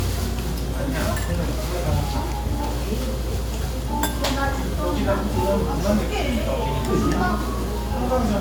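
No technical faults are audible.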